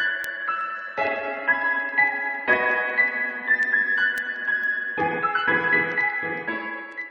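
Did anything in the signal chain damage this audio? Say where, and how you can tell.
Yes. The damage is at the digital interface between devices: word clock ticks run from 0.15 s to the end at 7.11 s, a sharp tick roughly every tenth of a second, around seventy in all, of uneven strength. The receiving device is free-running rather than locked to the sender, so each time the clocks slip a single sample is dropped or repeated. The rate fits a clock mismatch of roughly 300 ppm. A spectrogram shows thin, evenly spaced vertical lines across all frequencies. The waveform shows one-sample steps.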